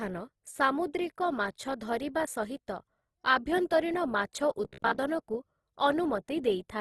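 Throughout the speech, the texture is grainy and rough, with nothing above 12.2 kHz, consistent with Opus compression, likely in its CELT music mode at a low rate around 16 kbps. Bands starved of bits are filled with folded or noise-like content, which roughens the voice.

From 4.65 to 4.98 s the voice turns into a rigid metallic buzz at about 67 Hz, the robotic sound from repeated short buffers. About half the audio there is repeated, with the real signal skipped, likely from a buffer of roughly 15 ms being replayed.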